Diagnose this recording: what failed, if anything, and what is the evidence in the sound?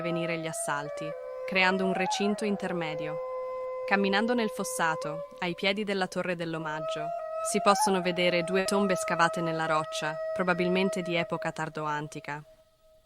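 At 8.59 to 8.67 s the sound briefly freezes into a held, fading tone before jumping ahead. This is a burst of packet loss on the network: the receiver extended the last audio for 60 ms while lowering it, then resumed with 60 ms of material missing.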